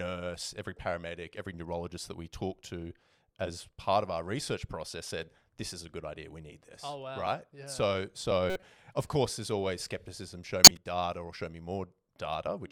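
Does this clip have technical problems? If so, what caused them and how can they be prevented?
Yes. Two stretches of compressed frames were damaged in transit or storage, and the decoder played them anyway, reading flipped bits as real gains and codes. This corrupt frame decoding puts energy at the wrong frequencies, heard as brief chirps, squeaks, blips or bursts of noise. The first, from 8.47 to 8.63 s, spans several frames at a moderate level, just before "of course there's always". The second, from 10.64 to 10.77 s, covers a few frames and is much louder, between "there's always skepticism show" and "data or show me". Adding checksums to each frame, and having the decoder conceal or drop any frame that fails its check, prevents this.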